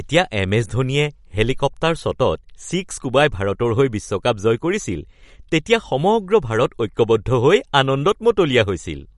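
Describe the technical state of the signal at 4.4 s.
At 4.4 s the speech carries audible MP3 compression artefacts, present from start to end of the clip rather than only at this moment. Nothing sounds above 11.2 kHz, and the weak frequency lines drop in and out between frames, giving a watery, swirly texture with metallic chirps on s sounds, which fits a low bitrate near 48 kbps. That flickering is what separates it from a plain low-pass filter, which would dull the treble cleanly. MP3 coding is the likely cause.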